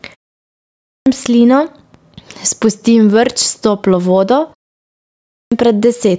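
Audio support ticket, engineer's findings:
Gain pumping throughout. Loud and soft parts pushed closer in level, sound squashed, swing around 10 dB. Likely mic gain far too high, fast limiter pulling it down.

Clipped start after a pause at 0.52–1.06 s and 4.92–5.52 s, after "toplo vodo". Roughly half a second lost each time, following pauses of about 0.45 s. Output device sleeping in silence, slow to wake.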